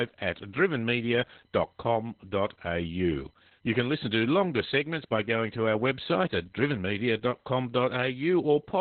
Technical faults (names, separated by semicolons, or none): Opus voice compression